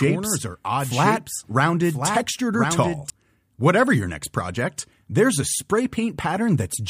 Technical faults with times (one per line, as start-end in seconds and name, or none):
0.00-3.10 doubled audio track